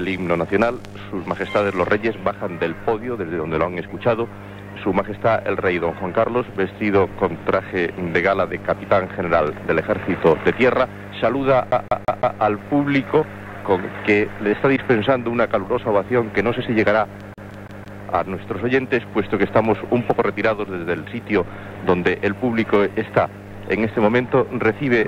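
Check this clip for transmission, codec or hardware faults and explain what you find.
Two stretches of the clip skip like a CD stuck on one turn, at 11.71 to 12.39 s and again at 17.34 to 18.01 s. A scratch on the disc knocks the laser back one track at the same point on each rotation, so a fragment of about 169 ms replays four times in each stretch, with a brief mute at every jump. The result is a fast, evenly spaced stutter before playback moves on.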